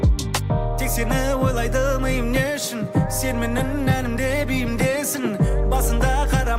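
No technical faults are audible anywhere in the recording.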